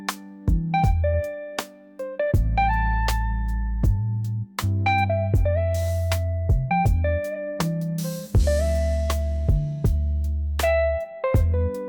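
Nothing stood out on listening to the audio.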